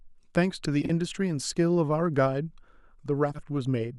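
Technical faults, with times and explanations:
0.81–0.90 s and 3.31–3.42 s, frames out of order: two neighbouring blocks of roughly 40 ms swapped places, giving a garbled flutter, and no lost time.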